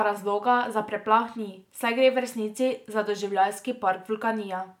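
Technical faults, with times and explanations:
No technical faults can be heard in this speech recording, which comes through as a continuous, intact signal.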